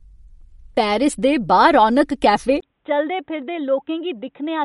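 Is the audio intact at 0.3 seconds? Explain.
No. At 0.3 s the speech shows MP3 compression damage, present across the whole clip. Nothing remains above 11.2 kHz. Sparse frequency lines flicker between frames, giving a watery, swirly tone. The plainly audible damage points to a low bitrate, likely near 45 kbps.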